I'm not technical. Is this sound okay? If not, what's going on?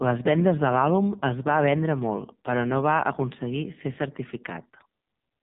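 No. From start to finish the speech has been through the AMR narrowband mobile codec, the squeeze used on ordinary phone calls. Nothing above about 3.8 kHz survives, so it sounds muffled, and heavy compression leaves the voice buzzy and synthetic.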